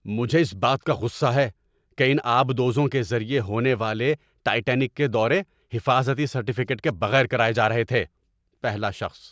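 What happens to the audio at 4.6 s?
At 4.6 s the speech continues intact, with no dropout, click, distortion or other fault at that moment.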